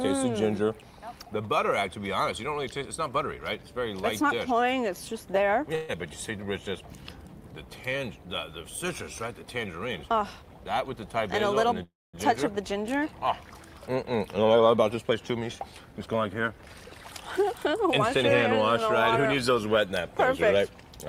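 The audio has two call audio freezes and two jitter buffer speed-ups. At 5.75 s the sound stalls for 133 ms and is carried on as a continuation of the last sound. At 11.83 s it stalls again until 12.16 s. That fill runs 306 ms and fades into about 230 ms of silence. Both likely come from delayed packets that emptied the jitter buffer. Nothing is lost. The audio resumes where it stopped, just later. Jitter buffer speed-ups occur from 11.07 to 11.83 s and from 14.77 to 16.92 s. The receiver cuts short pitch-period pieces to shed built-up delay. The first runs at 104% speed and removes roughly 40 ms. The second runs at 111%, removes about 300 ms and sounds hurried. Pitch stays the same throughout.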